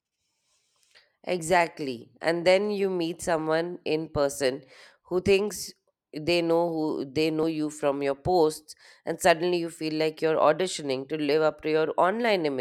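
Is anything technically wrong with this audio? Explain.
Yes. Skips at 1.39 s, 2.21 s and 7.43 s (just before "you from your posts") are likely a dropped buffer (overrun): unread samples were overwritten, so the speech jumps ahead, losing about 20 ms, 20 ms, then roughly 50 ms.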